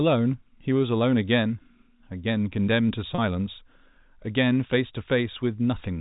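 Speech over a G.711 telephone channel, band-limited below 4 kHz. From 3.15 to 3.18 s, packet loss with pitch repetition fills a 30 ms gap, consistent with one lost packet, by repeating the last pitch period, leaving a briefly held, buzzy note.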